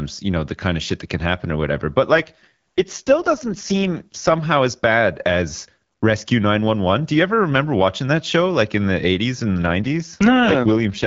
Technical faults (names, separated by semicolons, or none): AMR rate drop